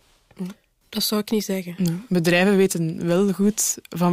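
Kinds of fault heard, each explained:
Sample clock jitter: The converter clock wobbles by around two microseconds, so samples land slightly early or late. From 2.14 s to the end, a hiss roughly 30 dB below the speech rides on it, growing on loud, bright sounds and vanishing in pauses.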